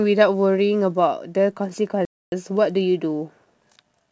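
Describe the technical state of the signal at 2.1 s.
At 2.1 s the speech is inside a playback stall running from 2.05 to 2.32 s: the sound cuts off abruptly for about 270 ms, likely because the player ran short of data. The waveform drops to a flat line, and the spectrogram shows an empty vertical band.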